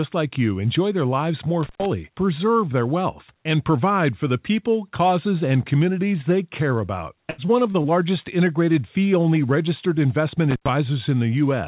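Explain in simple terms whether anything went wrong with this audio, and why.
Two things went wrong. The first is an intermittent contact, heard twice. A loose connection briefly breaks the line. The sound drops out for about a tenth of a second, with crackle at each edge. It happens after "lives more" (1.63 to 1.86 s) and after "fee only registered investment" (10.51 to 10.69 s).

The second is repeated packet loss, giving a robotic sound. From 7.30 to 7.86 s, just after "care about", chunks of audio went missing four times. The longest gap is about 80 ms. Each gap is filled by stretching the last sound, so the speech turns choppy.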